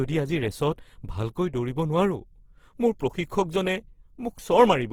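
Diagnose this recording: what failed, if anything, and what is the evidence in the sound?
The codec stage is the weak point here: across the whole speech clip the sound turns grainy and rough, without the swirly holes MP3 leaves, which points to likely Opus compression in its CELT music mode. The band energies survive but their detail is refilled with noise, which fits a starved stream around 16 kbps, while the response still reaches about 20.2 kHz.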